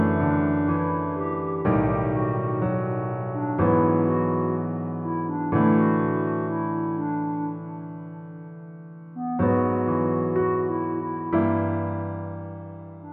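No technical faults can be heard anywhere in the audio; the signal stays intact and continuous for its whole duration.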